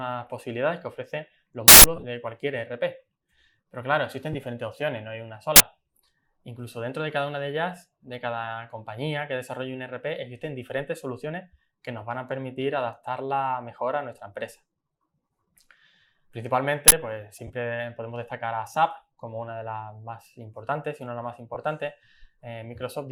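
At 1.68 s an uninitialised buffer plays for 0.16 s: memory left unwritten comes out as a harsh, loud burst of digital noise. Lost LE Audio frames follow from 1.96 to 2.04 s, scattered over 75 ms in short runs of around 15 ms. The decoder fills each gap from the last spectrum with scrambled signs, so the sound smears into noise. More frame losses come at 4.33 s, 17.47 s and 21.54 s, each 15 to 22.5 ms. Those lengths fit two or three 7.5 ms frames. Shorter uninitialised-buffer bursts of 40 ms hit at 5.56 s and 16.88 s. The light lossy compression is barely audible beneath these faults.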